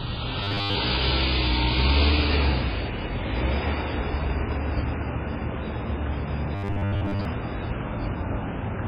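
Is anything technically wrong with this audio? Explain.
Yes, there are three problems.

Throughout the clip there is heavy damage consistent with MP3 compression. What remains has a watery, swirling texture with smeared attacks. This likely comes from an encoder starved of bits, which fits a very low bitrate of around 16 kbps. Such an encoder cuts the treble at a fixed point and drops quieter frequency components, which flicker in and out from frame to frame. A simple low-pass filter would dull the sound but would not swirl like this.

From 0.43 to 0.75 s, and again from 6.55 to 7.25 s, the sound turns into a rigid, metallic buzz at 100 Hz. This is robotic sound from repeated short buffers. Most of the real audio in these stretches is likely skipped while one fragment of about 10 ms is replayed over and over, and that repetition rate fixes the pitch. Unlike a dropout, the sound never goes silent, and unlike a stutter, the loop is too short to hear as separate repeats.

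At 4.52 to 4.54 s there is a single loud pop, roughly 10 dB above the surrounding sound, while the audio carries on underneath. It is most likely a sudden voltage step or spike, such as from a switch, a plug or static, being added to the signal. A digital click from a missing sample would be thinner and sharper.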